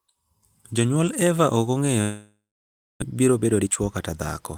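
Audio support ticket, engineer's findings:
Speech cuts at 2.01 s: last sound smeared into a fading buzz, then about 0.62 s of silence until 3.04 s; resumes with roughly 0.74 s missing. Likely long network dropout, receiver concealing, then muting, then rejoining further on.

3.12 to 4.16 s: speech hurried, 115% speed, pitch unchanged. Jitter buffer speed-up: buffer overfilled after the gap, receiver trimming pitch-period slices repeatedly, around 150 ms removed in total to cut the delay.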